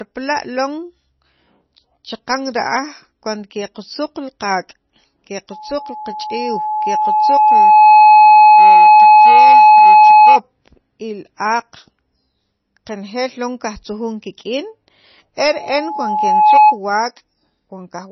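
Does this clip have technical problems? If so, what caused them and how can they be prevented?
Yes. Throughout, the speech sounds watery and swirly, with no content above about 5.9 kHz. That is likely heavy MP3 compression, and the damage fits a bitrate around 24 kbps. The starved encoder drops the treble and switches weak frequency lines on and off between frames. Encoding at a higher bitrate would prevent it.

A loudspeaker feedback squeal at 851 Hz builds over roughly two seconds from 5.51 s to 10.40 s. It returns from 15.48 s to 16.79 s, building over about one second. Both times it peaks around 15 dB above the speech. The microphone picked up its own loudspeaker, and the loop gain exceeded one at that frequency. Reducing gain, moving the microphone away from the speaker or notching 851 Hz prevents it.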